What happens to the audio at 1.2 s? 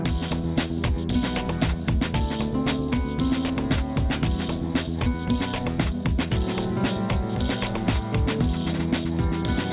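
At 1.2 s the sound carries aliasing, as it does through the whole clip. The audio was taken down to a lower rate without first removing content above the new limit, so energy above 4 kHz folds back below it as wrong, unrelated tones, with the fold point suggesting an 8 kHz rate. Those images sit around 15 dB under the signal, adding grit and a metallic edge. A plain low-pass cut would only dull the top; here false content crowds right up to 4 kHz.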